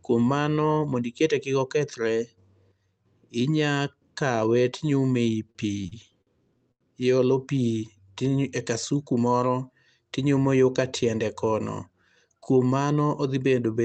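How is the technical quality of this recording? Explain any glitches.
The recording has one clear glitch, a burst of repeated stalls (stutter). It is heard over a call path whose coding caps the highs at about 8 kHz, which fits a 24 kbps Opus setting.

From 5.51 to 6.83 s, the sound stutters through six brief stalls. Packets arrived late, and the jitter buffer kept running dry. Each time, the receiver stretched the last sound to fill in, for 231 ms in total. The longest stretch was 90 ms. Nothing is lost, but the speech drags and hiccups.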